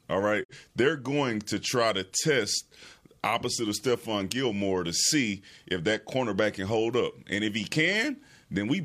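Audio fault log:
0.43 to 0.54 s, digital broadcast dropout: The speech fades out over about 20 ms and falls silent. It returns at 0.54 s. The receiver lost the signal or rejected a corrupted frame, then muted its output until clean data arrived. The missing stretch is about 43 ms, which fits a single lost frame. The short fade makes the cut sound soft rather than clicky. What was sent during the gap is gone, so the speech resumes further along.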